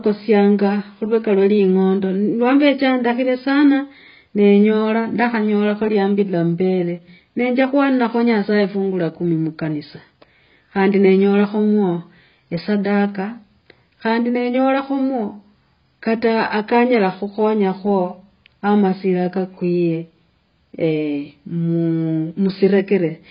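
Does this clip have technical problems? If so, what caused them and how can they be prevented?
Yes. The speech sounds dull and band-limited for the whole clip, with heavy coding damage and nothing above 5.1 kHz. That's most likely AAC compression, AAC-LC at a very low bitrate, around 16 kbps. At that rate the encoder lacks the bits to code all of its frequency lines, so it lowers the cut-off and thins out or fakes the spectral detail. To prevent it, record or export at a higher AAC bitrate.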